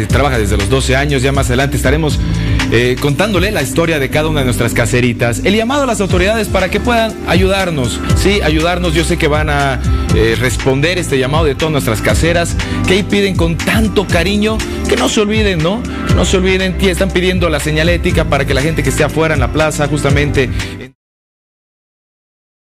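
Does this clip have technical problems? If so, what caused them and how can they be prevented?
No, nothing here needs fixing; the level falls away in a smooth, deliberate fade-out from around 20.5 s to 20.96 s, with no click or hard edge.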